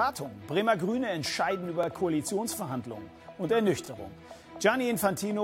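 Overlapping chunks: the stream was cut into 2-second pieces that each restart 25 ms early, so that sliver replays, causing brief stutters at 1.83–1.86 s and 3.86–3.88 s.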